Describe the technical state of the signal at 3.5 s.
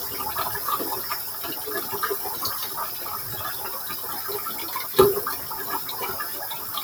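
At 3.5 s the sound pumps and thins, sustained parts and tails sagging by a few decibels. A noise suppressor applied to music or sounds, active throughout, treats them as noise.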